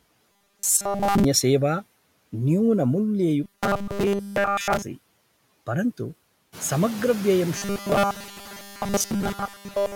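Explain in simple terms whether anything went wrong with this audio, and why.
Two things went wrong in this speech recording.

The first is robotic sound from repeated short buffers, from 0.32 to 1.24 s, 3.44 to 4.82 s, and 7.56 s to the end at 9.95 s. In these stretches the voice turns into a stiff, metallic buzz near 200 Hz that still roughly follows the words. The likely cause is new audio arriving too slowly, so the software keeps replaying the last tiny slice, about 5 ms, and skips most of the real sound. That short slice, repeated over and over, is what sets the fixed buzzing pitch. Unlike a suppressor's warble, this buzz has a single steady pitch and comes and goes in separate bursts.

The second is noise suppressor artifacts, which run through the whole clip. A noise filter pushes the background noise down hard whenever nobody is talking, then lets it back in under the voice. The noise seems to sink and rise with the speech. 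It is strongest after about 6.5 s, where the room noise itself gets louder. That noise was really in the room and is not a fault. Unlike the robotic bursts, this effect never stops, and it changes how the background behaves rather than making the voice buzz.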